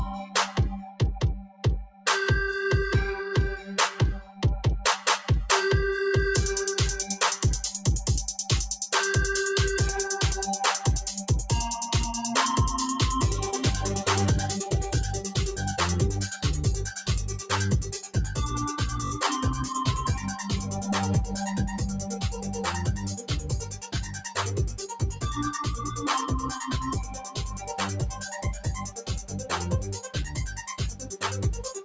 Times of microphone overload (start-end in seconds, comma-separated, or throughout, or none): none